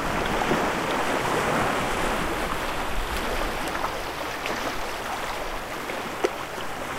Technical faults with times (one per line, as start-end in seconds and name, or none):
none